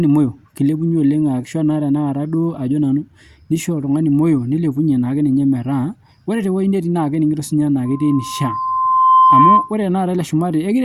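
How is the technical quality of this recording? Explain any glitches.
The speech has one clear fault, a loudspeaker feedback squeal. From 7.85 to 9.73 s, the mic-loudspeaker loop exceeds unity gain at 1 kHz, so a tone swells over about 1.5 s into a squeal louder than the speech.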